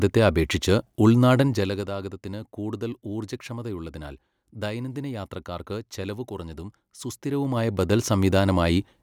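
Speech with zipper noise at 1.39–1.88 s (a fall of roughly 15 dB) and 7.04–8.06 s (a similar rise). Unsmoothed 2 dB steps tick audibly.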